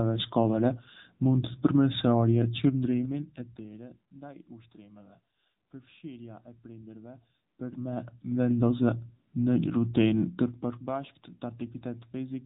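Throughout, the speech carries AMR narrowband mobile codec damage: nothing above 3.8 kHz, plus a buzzy, synthetic edge that fits a low rate near 8 kbps, unlike plain low-pass filtering.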